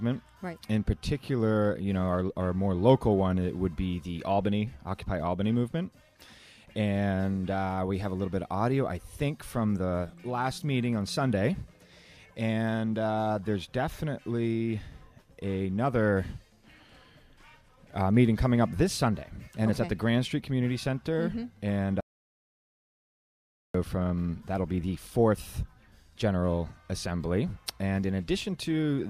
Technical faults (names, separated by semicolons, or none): audio dropout to silence